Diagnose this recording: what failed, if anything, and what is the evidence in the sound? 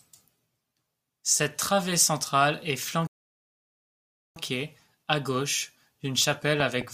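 Playback stall, at the playback buffer or driver stage: the speech halts mid-flow at 3.07 s and the output stays silent until 4.36 s, a gap of about 1.29 s. The likely cause is a starved buffer or blocked audio thread. Unlike a natural pause, the cut is abrupt rather than a phrase ending.

Loud pop, at the analogue wiring or driver stage: two sharp pops land in quick succession between 6.60 and 6.84 s, peaking about 10 dB above the speech, which carries on underneath. A voltage pulse from a plug, switch or driver glitch is the likely cause. Unlike clipping, the signal isn't flattened.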